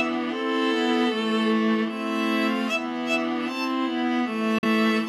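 The sound cuts out abruptly near the end, from 4.58 to 4.64 s. This is a digital broadcast dropout. The audio fades to silence in about 3 ms, stays silent for about 43 ms, and then resumes. The receiver failed to decode a stretch of the stream, either because the signal was lost or a frame failed its checksum. It muted until valid frames arrived again. The length of the gap fits a single lost frame. The missing audio is gone.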